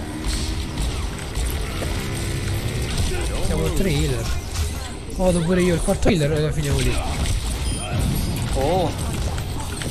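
Damaged data in a compressed stream at 1.81–1.84 s, 6.06–6.10 s and 9.28 s: corrupt frames throw the decoder out of sync, producing short chirps or blips.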